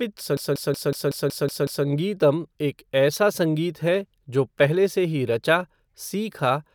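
From 0.37 to 1.86 s there's a system hang loop: the system froze while the audio hardware kept replaying the same 186 ms stretch eight times, about 5.4 times a second. That's a machine-gun stutter, consistent with an 8192-sample ring buffer cycling untouched.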